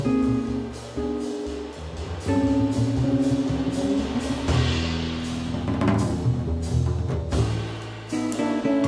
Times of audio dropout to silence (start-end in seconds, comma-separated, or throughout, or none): none